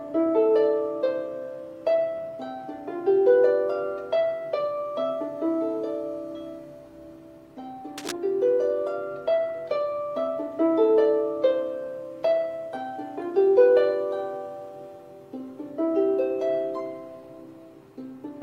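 From 7.98 to 8.13 s a brief cable scratch noise sits over the sound, a dense, uneven rustle roughly 10 dB below the signal. Its likely cause is a worn connector or cable shifting its contact resistance. A spectrogram shows a ragged broadband smear; the waveform shows jagged spikes.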